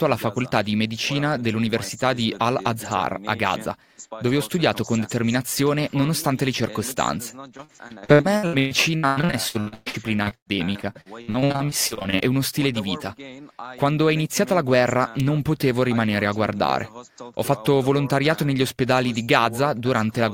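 From 7.57 to 12.29 s the sound turns choppy and robotic, with pieces dropping out. This is repeated packet loss: dozens of short holes, the longest 120 ms, were each patched by extending the last sound, so about 38% of that stretch is filler.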